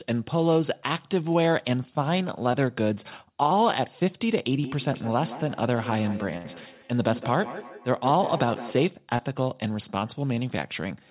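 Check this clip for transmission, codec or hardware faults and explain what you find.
Three kinds of fault are audible: two short concealed packet losses, a feedback echo between two devices, and one burst of packet loss. All of it is heard through a narrowband call path with nothing above 4 kHz, which fits a telephone codec such as G.711.

The short concealed packet losses fall at 2.52–2.55 s and 9.16–9.21 s. In each, roughly 20 ms of audio failed to arrive in time, and the receiver covered the hole by extending the preceding sound before crossfading back to real speech. Each is heard as a quick smear or wobble, and a brief consonant may drop out. On a spectrogram, harmonics or noise stretch flatly across the gap with no natural movement. The waveform shows a short, over-regular stretch of repeated cycles.

The feedback echo between two devices runs from 4.58 s to 8.94 s. A second device on the same call, in the same room, replays the incoming audio, and the first microphone picks it up again. 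Neither echo canceller removes sound played by the other device. Speech returns at around 150 ms intervals, thinner and more metallic each pass, at about 13 dB below the direct speech at its strongest. A spectrogram shows faint, evenly spaced copies trailing each syllable. The waveform envelope has a stepped, decaying tail.

The burst of packet loss hits at 6.37–6.46 s, inside the echo section. About 80 ms of speech was lost in a row. The concealment carried the last sound forward and faded it out, so it comes across as a short held buzz or dying hiss, and then speech resumes with that piece missing. On a spectrogram this appears as a frozen, fading block. In the waveform, the amplitude sags before a sudden restart.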